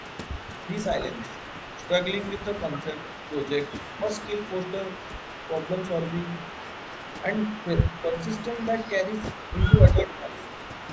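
A noise reduction stage set far too aggressively runs through the whole recording. This is overdone noise removal: it shuts down individual frequency bands it mistakes for noise, taking quiet parts of the speech with them. The background drops and breaks up into twinkling specks, and the voice's top is already capped near 8 kHz by the call's microphone filtering.

Also from start to finish, an echo leak is audible, likely from a loudspeaker-side echo canceller that failed to remove everything its microphone caught. A faint delayed copy of the speech, arriving about 246 ms late and around 25 dB below it, trails behind the main voice.

Speech suppressed in double talk follows at 2.83 to 2.97 s, 8.03 to 8.23 s and 9.82 to 10.38 s. The likely cause is an echo canceller that could not separate its own talker from incoming echo and turned both down. The voice dips by roughly 5 dB in the first spot and about 10 dB in the later two, sounding briefly sunk or chopped.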